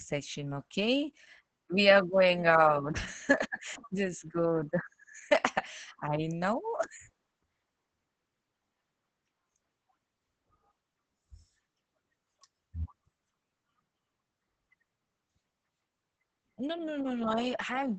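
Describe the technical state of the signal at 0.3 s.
Opus voice compression at 0.3 s, as throughout: coarse linear-prediction coding, capped at 8 kHz and fitting about 10 kbps, leaves speech muffled, hoarse and robotic.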